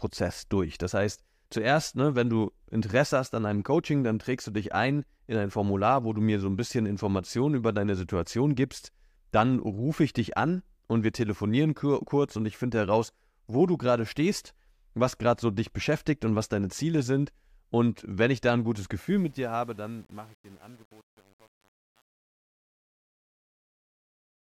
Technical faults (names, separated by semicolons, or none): truncation distortion on a fade